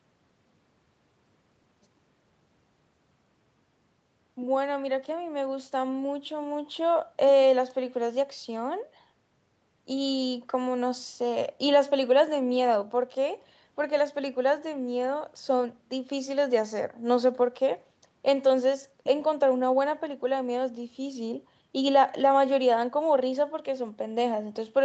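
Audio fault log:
No audio fault to log.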